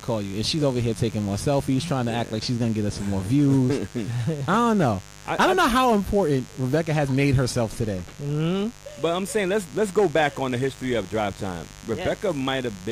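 A mains buzz runs through the whole clip. It is a steady, raspy buzz built on 50 Hz. Sharp switching spikes, twice per mains cycle, leaked into the signal path. Their harmonics reach into the kilohertz range. The buzz sits roughly 20 dB below the sound.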